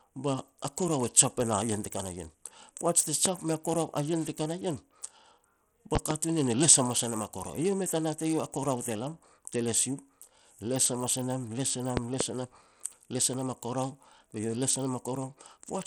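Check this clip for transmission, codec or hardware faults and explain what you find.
Two faults are audible in this speech clip.

Bluetooth SBC compression runs throughout. The treble flickers and gritty noise rides on the voice, likely from coarse sub-band quantisation, which fits a low bitrate around 80 kbps.

Loud pops occur at 3.26–3.29 s (one pop, about 15 dB above the speech), 5.95–6.14 s and 11.97–12.24 s (two pops each, about 20 dB). These are likely voltage steps from a plug, switch or static discharge, and they snap sharply over the speech, which continues underneath.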